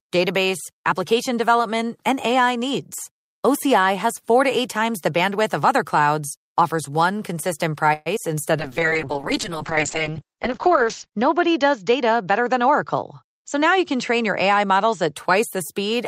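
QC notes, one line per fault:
7.93–8.08 s, call audio freeze: just after "clouds offers one consistent", the last sound is stretched into a fading buzz for about 125 ms, then the audio resumes exactly where it stopped. This is likely a brief delivery stall that emptied the jitter buffer. Unlike packet loss, nothing is dropped; a gap is inserted.
8.16–8.18 s, short concealed packet loss: moments after the stall, about 40 ms of audio never arrives in time. The receiver covers the hole with a few milliseconds of extrapolated sound before blending back, so the result is a quick smear. Unlike the freeze, real audio is lost here rather than delayed.
8.60–15.21 s, call bitrate drop: the encoder falls from 64 kbps to 7 kbps and bandwidth narrows from 20 kHz to 8 kHz. The lowest rate holds for about 2.4 s. The sound turns muffled and watery for several seconds, a sustained change in tone rather than a momentary glitch.
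12.22–14.42 s, jitter buffer speed-up: inside the low-bitrate stretch, the playback runs at 105% speed. About a tenth of a second is trimmed away in small pitch-period slices to shed surplus delay. The sound seems hurried, but its pitch stays the same, which separates this from a resampling error.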